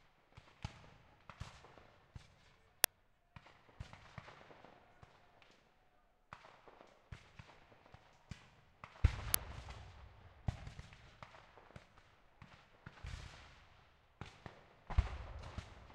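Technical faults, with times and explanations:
2.84 s and 9.34 s, uninitialised buffer: two brief, loud cracks, each about 1.5 ms long, which fits a 64-sample block played out before any audio was written into it, so leftover memory contents were heard as samples.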